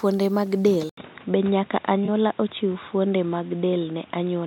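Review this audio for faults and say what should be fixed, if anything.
At 0.89 s the recording likely switched its input to a poorer microphone or a headset's call profile. After a gap of about 80 ms, the speech loses everything above 3.8 kHz and turns dull and boxy until the end. A new noise floor sits roughly 30 dB below the speech, while the level barely changes. Locking the input device for the whole session would prevent this.

From 2.05 to 2.09 s an AAC frame was lost, which fits a single missing frame of about 21 ms, and the decoder patched the gap from the preceding spectrum. The result is a brief smeared, phasey blur in the speech. Sending the stream over a more reliable link or adding forward error correction would prevent it.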